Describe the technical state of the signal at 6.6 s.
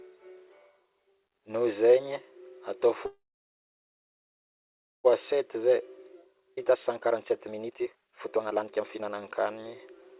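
Around 6.55 to 6.59 s there's a skip ahead: roughly 0.4 s of speech got dropped while later audio was already queued, so playback jumps forward with a near-seamless join. It sits inside a jitter buffer speed-up running 5.32 to 9.64 s, where the receiver keeps trimming pitch-period slivers to drain excess delay, so the speech comes out about 134% fast at unchanged pitch and sounds hurried.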